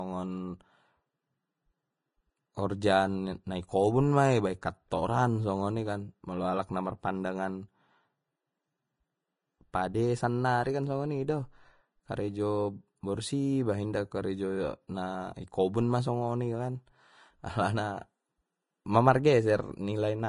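Vorbis compression throughout this speech: nothing above 10.5 kHz, and coarsely quantised treble detail turns grainy and hissy, which likely points to low-bitrate Vorbis coding near 28 kbps.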